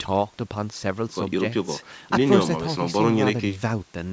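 No technical faults can be heard anywhere in this speech.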